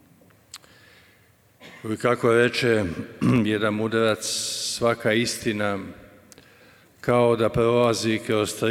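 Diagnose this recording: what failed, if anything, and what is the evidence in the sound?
A loud pop hits at 3.29 s, actually a quick double pop running to about 3.40 s and peaking a few dB above the sound, which keeps going underneath. That's likely an electrical step in the analogue wiring, a plug or switch disturbance, shaped into paired thumps downstream.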